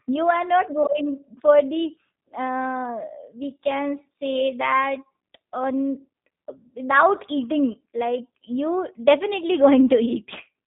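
Throughout the recording the speech carries G.729 codec damage, plainly audible as a rough, slightly synthetic texture in a band held to roughly 150 Hz to 3.7 kHz, which fits an 8 kbit/s G.729A stream. Unlike simple low-pass filtering, the character comes from a coarse pulse-coded excitation driving a modelled vocal tract.

From 0.83 to 0.87 s, VoIP packet loss concealed by the speech codec replaces about 20 ms, which fits a single lost packet. The decoder extends its last pitch and filter with falling gain, giving a brief fading smear that recovers gradually. A hard dropout would instead leave silence or a click.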